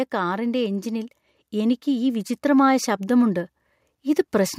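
From 0.1 s to 3.5 s the level climbs steadily by about 7 dB, and the voice and the background noise swell together rather than the speech alone getting louder. That joint rise is the mark of automatic gain rising: the gain control judged the incoming signal too quiet and kept raising its gain gradually over those 3.4 seconds, lifting everything it received, room noise included, instead of correcting the level in one step.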